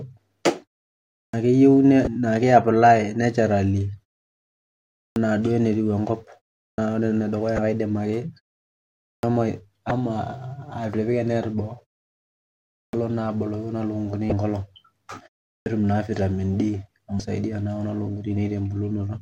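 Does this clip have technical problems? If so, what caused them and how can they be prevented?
Yes. Six clipped starts after a pause, at 1.24, 5.07, 6.69, 9.14, 12.85 and 15.57 s (the last just before "naa vitamin"), each losing about 80 to 95 ms. The output device dozes off during silence and needs that long to wake, so speech onsets vanish. Keeping the output stream running through pauses prevents it.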